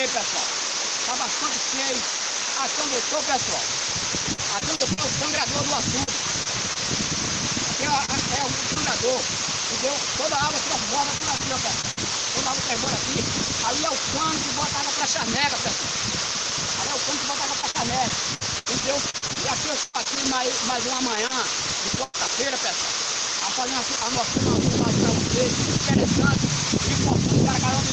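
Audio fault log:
4.33–6.77 s, 11.18–11.99 s and 17.61–22.16 s, repeated packet loss (robotic sound): packets kept going missing, 7, 4 and 13 gaps, longest 45, 56 and 102 ms. Each hole was patched by extending the previous sound, so stretches turn choppy. Roughly a tenth of a second in the first and last runs came back via error correction.
8.05–8.10 s and 8.74–8.77 s, short concealed packet loss: about 20 ms of audio arrived too late each time, and the decoder continued the last sound to bridge it before blending back. This gives a brief smear or wobble where a short sound can drop out.
8.18–8.20 s and 8.76–8.77 s, lost packet rebuilt from error correction: a single 20 ms packet was lost each time and replaced by the low-bitrate Opus copy carried in the following packet. There is no gap, but those frames sound rougher and noisier than their surroundings.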